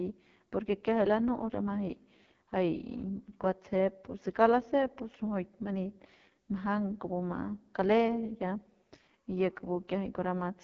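From start to finish the speech carries the artefacts of the AMR wideband (HD Voice) codec, heavily damaged. The encoder models the vocal tract and drives it with sparse pulses, and at this rate that excitation is too coarse, so voices come out rough and raspy, which fits the lowest 6.6 kbit/s mode. On a spectrogram the energy stops sharply at about 6.7 kHz, with smeared, blotchy harmonics and hissy, noise-like texture at the top of the band.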